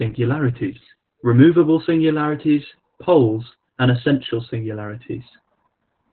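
Speech running throughout with heavy Opus voice compression: the SILK coder works narrowband at around 8 kbps, leaving nothing above about 4.1 kHz, so sibilants lose their edge while the coarsely coded excitation makes the voice sound hoarse, muffled and slightly robotic.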